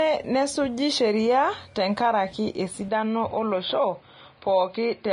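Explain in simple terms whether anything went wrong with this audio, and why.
The whole recording sounds hissy and grainy, with no crisp treble above about 10.5 kHz, likely from heavy Vorbis compression squeezing the file too small. From 2.88 s, right after "nesuji sheria tenkaraki", the sound turns dull and boxy with no break, suggesting the input switched to a poorer device passing nothing above about 4.9 kHz.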